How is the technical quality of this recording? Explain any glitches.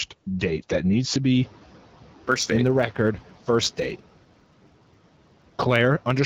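Two glitches stand out in this call-style speech recording, which comes through an HD Voice (AMR-WB) path at 12.65 kbit/s with only light codec coloration.

First, the noise suppressor is catching up. Right after "date that needs to", the room noise jumps by about 11 dB around a second and a half in. From 1.34 to 1.56 s, the suppressor's noise estimate lags, so the noise breaks through before sinking by about 7 dB over roughly 220 ms.

Second, there's a block size mismatch with truncation from 2.26 s to the end. One stage writes slightly longer blocks than the next stage reads, so the tail of each block gets dropped. That gives a steady buzz at about 92 Hz, while pitch and pace stay essentially normal.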